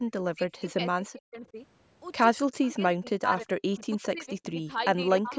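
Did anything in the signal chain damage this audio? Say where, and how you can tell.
Yes. Speech suppressed in double talk appears at 0.0–0.79, 1.04–1.56, 2.47–3.29, 3.45–3.49, 3.86–4.69 and 5.21–5.34 s. The speech dips or breaks up, by as much as about 40 dB. In call processing, the echo canceller likely mistook the speech for loudspeaker echo while the far end was talking, and attenuated both.

Echo leak appears at 2.63–2.71 s and 3.73–3.84 s. These are faint, delayed copies of the speech, lagging by 301 ms and 291 ms and sitting about 25 to 30 dB below it. These scraps likely passed through a far-end echo canceller that failed to fully remove its loudspeaker pickup.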